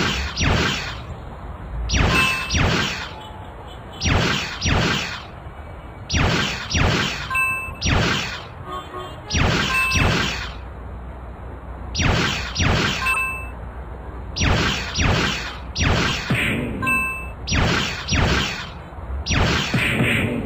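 Five corrupt frames decoded are heard, at 1.07–1.12, 6.70–6.75, 7.70–7.75, 13.13–13.19 and 16.08–16.16 s. Each lasts about 50 to 75 ms. The length points to two or three damaged frames each time. Flipped bits reached the decoder, which played them anyway. Misread values put energy at the wrong frequencies. Each event is a short chirp, squeak, blip or noise burst. The error is weakest at 1.07 s and strongest at 13.13 and 16.08 s.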